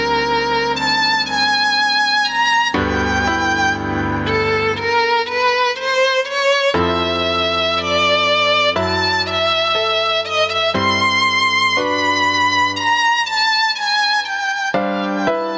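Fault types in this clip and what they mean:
Gain pumping: Throughout the clip, the level swings by roughly 15 dB. Loud and soft parts sit closer in level, leaving the dynamics squashed. The likely cause is input gain set far too high, with a fast limiter clamping down on peaks.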